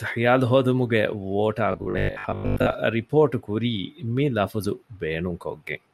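From 1.72 s to 2.74 s the speech turns into a rigid, metallic 50 Hz buzz, robotic sound from repeated short buffers. The likely cause is audio arriving too seldom, so roughly 70% of this stretch is the last 20 ms looped. Unlike plain dropouts, the words stay loosely traceable.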